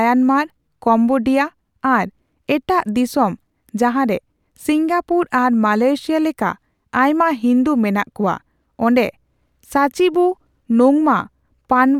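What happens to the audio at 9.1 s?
At 9.1 s the speech carries on intact, with no dropout, click, distortion or other fault at that moment.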